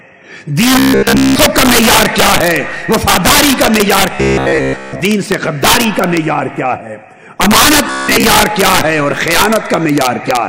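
Throughout, an integer overflow lets peaks pushed about 1 dB past full scale wrap to the opposite sign, so the loudest couple of percent of samples snap into harsh cracks. From 0.79 to 1.36 s, 4.15 to 5.00 s, and 7.88 to 8.24 s, audio likely arrived too seldom, so short buffers of about 15 ms repeated. This imposed a rigid metallic buzz at 66.8 Hz, fully in the first stretch and partly in the later two.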